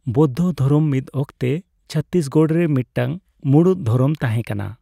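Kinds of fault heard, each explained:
No faults can be heard in this recording.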